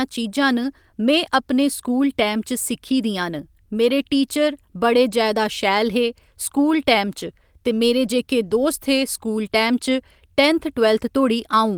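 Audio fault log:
0.63–0.65 s, lost packet rebuilt from error correction: what sounds like one lost packet was replaced by the low-bitrate backup copy carried in the following packet, so the decoder filled the 20 ms without a gap, but that brief stretch of speech turns rougher and noisier.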